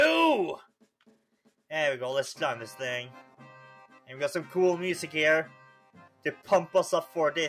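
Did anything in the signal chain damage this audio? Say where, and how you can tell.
Yes. At the call-processing stage, a noise suppressor tuned for speech stayed active on material that isn't speech, and it acts on the whole clip. The suppressor mistakes sustained tones and decaying tails for background noise and keeps pulling them down, while onsets slip through before it reacts. You can hear this as a steady pumping, with level swinging by roughly 5 dB as held sound sinks and recovers, thinning the body between attacks.

From 5.54 to 6.48 s there is a heavier case of sound cut by the noise suppressor. Here the suppressor classified the passage as noise and attenuated it harder than anything else, reaching about 12 dB of reduction at its deepest, with most of that stretch affected. The giveaway is that the sustained, fading part collapses early and drops away in level, while anything abrupt in the same span still comes through largely intact.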